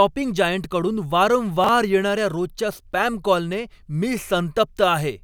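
At 1.64 to 1.69 s, just before "येणार्या रोजच्या स्पॅम कॉलने", chunks out of order: one 21.33 ms chunk arrives a single chunk late and plays after its successor. No audio is lost, but the swapped order and hard joins produce a brief jumbled stutter.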